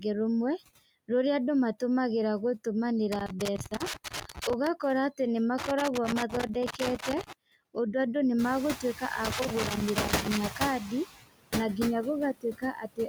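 A speech recording with noise suppressor artifacts throughout. The suppressor pulls down its estimate of steady background noise by about 18 dB, frame by frame. So the background dips in the gaps and climbs back under the voice. The effect is most noticeable after about 8.5 s, when the room noise rises by about 21 dB to sit about 11 dB below the speech. Loose connector crackle appears three times: from 3.12 to 4.67 s, just before "atĩ nĩ"; from 5.58 to 7.33 s; and from 9.25 to 10.37 s, just before "kandi na nginya". Each is an irregular burst of scratching and crackle. A worn or dirty contact is making and breaking as it moves. That chops the signal, and any DC on the line turns each break into a pop. There is also speech cut by the noise suppressor, where it mistook parts of the voice for noise. Between 3.58 and 4.13 s, in the middle of the first crackle, short pieces add up to roughly a tenth of a second. 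They are pushed down by up to about 10 dB and sound faint. From 12.34 s to the end, after "kandi na nginya", the cuts are deeper. They reach about 19 dB over roughly a third of a second, so the speech sounds swallowed.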